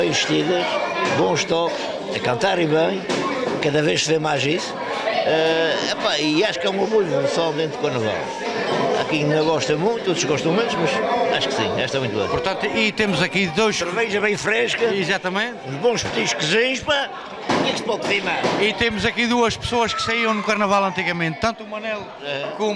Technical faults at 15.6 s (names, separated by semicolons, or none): none